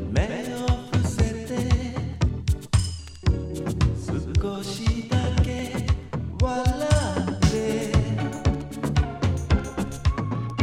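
The audio twice drops about a semitone flat and plays about 5.9% slower, from 2.99 to 4.27 s and from 9.05 s to the end. Speed and pitch shift together. This is a drift correction step, likely a clock-matching buffer adjustment.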